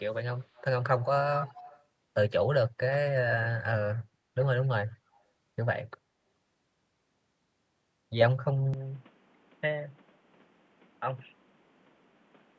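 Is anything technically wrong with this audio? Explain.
Yes. The speech contains an echo leak, at 0.54 to 0.64 s, 1.39 to 1.84 s, 4.9 to 4.95 s and 5.13 to 5.2 s. A copy of the speech trails it by 241 ms. It is likely residual loudspeaker pickup that the far end's echo canceller failed to remove. The echo is clearly audible in the 1.39 s stretch and very faint elsewhere.

At 8.74 s the sound changes abruptly, with no gap, and stays that way to the end. This is likely the input switching to a poorer device. It passes a narrower band, so the speech turns dull and boxy. It also drops a few dB in level, and a new noise floor appears roughly 30 dB below the speech.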